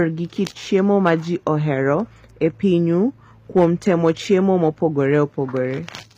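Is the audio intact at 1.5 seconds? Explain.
No. At 1.47 s, just before "ohero e pinyu", a stage was driven right to its limit, about 0 dB over, so a peak got flattened in a brief hard clipping crackle. Throughout, likely HE-AAC compression at a rate fitting 24 kbps rebuilds the treble from copied lower bands, leaving nothing above 15.4 kHz and making sibilants gritty and metallic.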